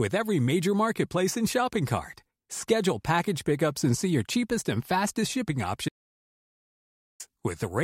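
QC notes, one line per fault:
5.89 to 7.20 s: audio dropout to silence. The speech cuts out mid-flow for 1.31 s with no room tone, likely from lost input while recording continued.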